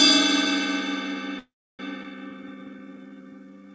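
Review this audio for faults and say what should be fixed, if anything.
At 1.39 s the sound stalls and doesn't pick up again until 1.80 s: a call audio freeze. You get a short fading tail of the last sound, then about 300 ms of silence, and it resumes exactly where it left off, so nothing's lost but 400 ms of gap has been inserted. The likely cause is packets stalling in transit long enough to drain the jitter buffer. To prevent it, look at the network path for bursty delay and give the buffer a bit more headroom.

Right after that, from 2.03 to 2.05 s, there's a skip ahead: playback jumps forward with only a tiny 12 ms bridge, and roughly a fifth of a second of the sound just vanishes. That's audio dropped on the way or by the buffer overflowing, with the two sides joined almost directly. To prevent it, let the buffer bleed off excess delay gradually by time-compressing instead of discarding whole chunks.

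Then from 2.31 to 3.63 s there's a jitter buffer slow-down. The sound plays at about 86% speed with the pitch unchanged, so things feel stretched. That's the receiver repeating single pitch periods over and over to add about 200 ms of reserve back into a buffer that's running low. To prevent it, stabilise the delay target so the buffer isn't whipsawing between draining and refilling.

The call path itself, with nothing above 8 kHz, fits a 64 kbps G.722 link.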